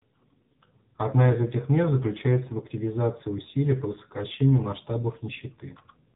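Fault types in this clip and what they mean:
AMR narrowband mobile codec, throughout: nothing above 4 kHz survives, and the speech has a plainly buzzy, synthetic edge. This points to a low AMR-NB mode near 7.4 kbps, where each 20 ms frame is rebuilt from a vocal-tract model driven by sparse pulses.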